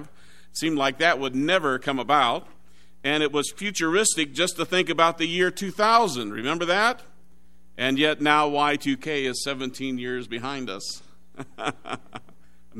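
No technical faults can be heard anywhere in the clip.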